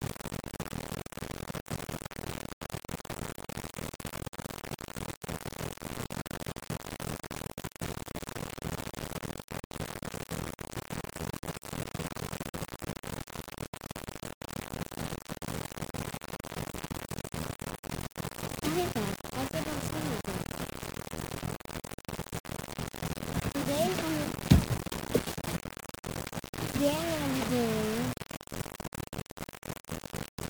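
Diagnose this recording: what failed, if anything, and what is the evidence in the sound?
The sample-format conversion stage most likely reduced the audio to around 5 bits by plain rounding, with no dither, and the damage runs through the whole clip rather than at any one moment. This is low bit depth without dither: with so few steps, the rounding error tracks the waveform and sits only a few decibels below the signal. The sound is coarse and grainy throughout, its grit shifting with the material, while the quietest passages collapse toward silence or sputter between adjacent levels.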